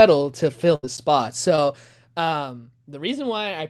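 Just after "to fill", from 0.75 to 0.86 s, a burst of packet loss leaves about 80 ms of speech missing. Roughly 74 ms is filled by stretching and fading the last sound before speech resumes further on. Unlike a brief glitch, a chunk is skipped.

At 1.56 to 1.59 s, a short concealed packet loss covers about 20 ms with a continuation of the preceding sound. It passes as a quick smear or wobble, far shorter than the earlier burst.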